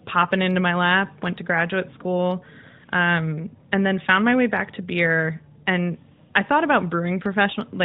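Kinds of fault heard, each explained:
No faults heard in this speech recording, so there is nothing to list.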